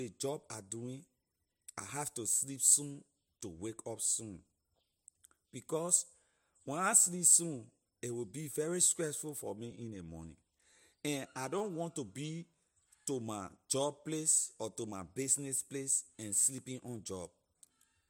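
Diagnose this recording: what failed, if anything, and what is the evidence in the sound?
The driver or buffer stage was starved of new audio twice and replayed its last buffer, a repeated buffer fault. At 9.72 s one extra copy gives a click. From 11.59 to 11.61 s four extra copies, with hard joins, make a brief buzz. Both fit a 5 ms buffer, and hardly any audio is lost.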